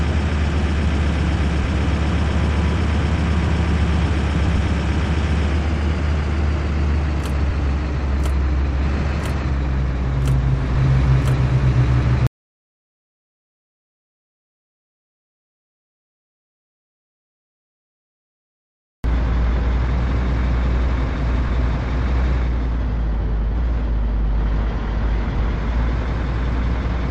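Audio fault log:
12.27–19.04 s, audio dropout to silence: the sound cuts off mid-flow and there's dead digital silence for about 6.8 seconds, no room tone at all, before it snaps back in. Likely the input went away while the recorder kept writing zeros, so that stretch is just gone.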